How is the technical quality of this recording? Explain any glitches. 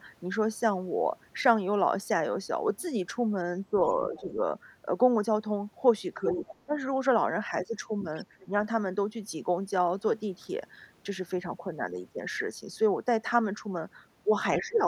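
The recording has repeated echo-canceller trouble during moments of overlapping talk. The talker's speech is turned down, and a faint second voice slips through.

Speech suppressed in double talk occurs at 3.69–3.94 s, 4.10–4.41 s, 6.22–6.78 s, 8.45–8.52 s and 14.59 s to the end. The level dips by about 10 dB, and by about 15 dB in the final dip. Both sides likely spoke at once, so the canceller ducked everything. Unlike a network dropout, the speech is turned down by the canceller rather than lost in transit.

The other side's voice leaks through at 3.91–4.24 s, 6.29–6.56 s and 8.17–8.46 s, about 20 dB below the main speech, and about 25 dB below at 8.17 s. Loudspeaker sound was likely left partly uncancelled in the microphone. It is a separate voice, not a delayed copy of the talker as room reverberation would be.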